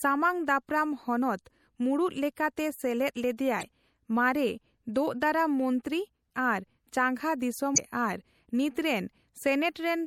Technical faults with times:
0.00-10.06 MP3 compression
3.59-3.63 damaged data in a compressed stream
7.74-7.78 damaged data in a compressed stream

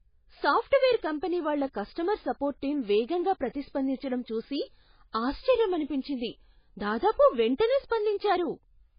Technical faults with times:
0.00-8.98 MP3 compression

